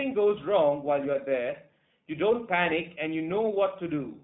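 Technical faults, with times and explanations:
Throughout, iLBC codec: the speech has nothing above 3.9 kHz and a plainly audible rough, synthetic edge. The codec encodes each short frame's excitation independently of the previous one, and the texture fits its 20 ms, 15.2 kbps narrowband mode.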